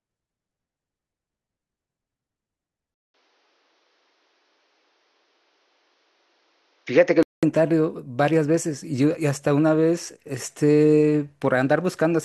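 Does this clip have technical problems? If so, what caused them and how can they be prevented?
Yes. From 2.94 s to 7.43 s the speech turns dull and boxy, with nothing above 6.7 kHz, and then clears again. A 200 ms gap marks the change. A faint new background noise appears, but the level stays about the same. The likely cause is an input switched to a poorer device mid-recording, one with a narrower band and its own noise. To prevent it, lock the input device in the system settings and turn off automatic device switching before recording.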